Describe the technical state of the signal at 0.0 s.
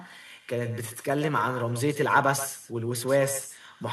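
At 0.0 s, as throughout, there is echo with no canceller. The far end's loudspeaker feeds its microphone unchecked. A thinner copy trails the speech by roughly 150 ms, about 12 dB down.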